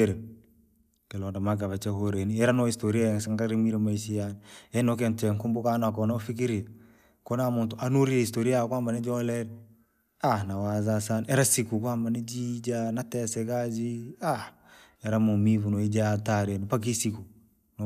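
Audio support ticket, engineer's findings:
Listened through the whole speech recording and found nothing to flag, so no component or mechanism to chase on this one.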